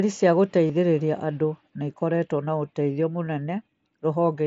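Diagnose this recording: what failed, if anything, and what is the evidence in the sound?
The fault is concealed Bluetooth headset packet loss on the wireless link between headset and phone. At 0.68 to 0.70 s a gap of about 22.5 ms, which fits three consecutive lost mSBC frames, is bridged by repeating the best-matching stretch of the preceding waveform. This gives a brief held, buzzy tone with a slight warble as the real speech resumes. At 3.26 s a single 7.5 ms frame is patched the same way and is nearly inaudible.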